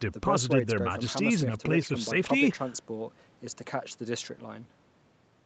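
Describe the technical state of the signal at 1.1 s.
At 1.1 s the speech is intact, carrying only the normal character of the call path, with the content above 8 kHz absent as expected from its bandwidth.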